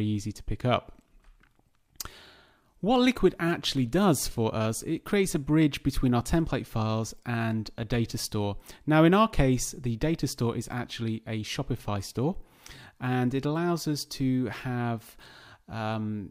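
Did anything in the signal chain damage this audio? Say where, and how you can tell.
No, nothing along the signal chain has left an audible mark on this audio, from capture through to playback.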